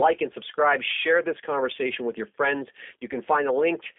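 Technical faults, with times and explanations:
Throughout, G.729 codec: rough, synthetic-sounding speech with nothing above 3.7 kHz, as sparse pulse-based frame rebuilding fits an 8 kbit/s G.729A stream.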